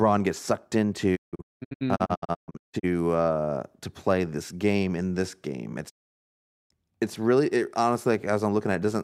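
From 1.15 to 2.85 s, after "gets sucked", a digital broadcast dropout leaves several short muted holes (longest 0.19 s, about 1 s lost in all). At 5.88 to 6.72 s, after "game in this game", it mutes again. Brief 20 ms fades into true silence, not smeared or repeated sound, mark a receiver muting on bad frames.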